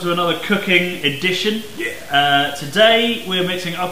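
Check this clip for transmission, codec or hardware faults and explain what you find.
There's one problem running through the whole clip: low bit depth without dither. It sounds grainy, likely from truncation to around 6 bits, leaving distortion roughly 25 dB down that follows the sound and crackles on quiet parts.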